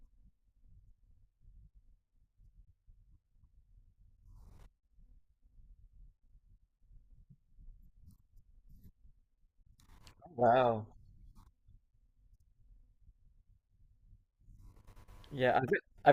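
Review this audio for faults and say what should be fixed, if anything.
Nothing needs fixing; no faults can be heard here.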